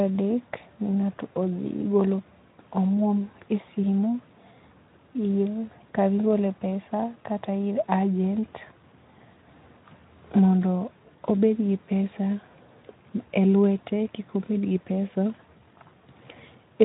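No technical faults turn up anywhere in this speech clip. The audio has passed through the Speex codec at light settings, which shows as a band that stops at about 3.9 kHz, with nothing above it.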